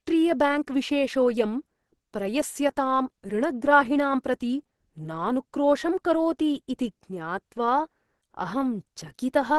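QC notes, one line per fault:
throughout: Opus compression, likely from a low-rate encode in the codec's hybrid speech mode, which fits a rate near 16 kbps. The speech sounds hoarse, somewhat muffled and grainy, with plainly audible coding damage where upper bands are filled with folded or noise-like energy instead of real detail. Nothing sounds above 12.1 kHz. A spectrogram shows a flat ceiling at 12.1 kHz and a smeared, noisy texture in the bands just below it.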